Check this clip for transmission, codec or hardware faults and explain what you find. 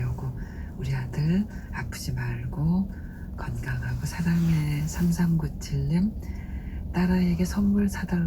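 One fault turns up. Dropped samples at 3.68 s: a fraction of a millisecond of the stream is likely missing, so the waveform leaps straight to a later value. Nothing audible is lost, but the step is heard as a single sharp click.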